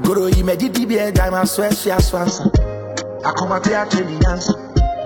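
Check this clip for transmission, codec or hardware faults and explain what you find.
One fault: an adaptive stream at a lower bitrate from 2.26 s to the end. The stream abruptly switched to a much lower-bitrate version, consistent with a drop from 96 kbit/s AAC to roughly 8 kbit/s HE-AAC. Without any gap, treble vanishes above 7.8 kHz and codec artefacts thicken.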